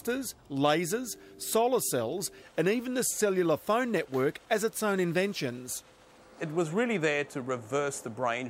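Nothing in the signal shows any technical fault at any point in the recording.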